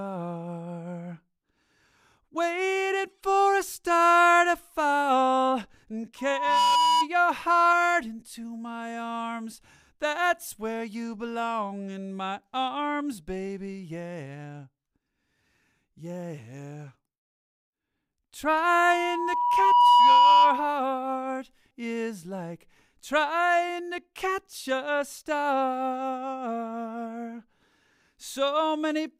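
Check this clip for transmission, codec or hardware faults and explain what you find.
The clip has one kind of fault, occurring twice: loudspeaker feedback squeal, from 6.18 to 7.08 s and from 18.66 to 20.79 s. A microphone is picking up the loudspeaker it feeds, and at 976 Hz the loop gain exceeds one, so that tone reinforces itself on each pass. The first squeal swells in under half a second to about 5 dB above the audio. The second builds more slowly, over about a second and a half, and reaches about 10 dB above it.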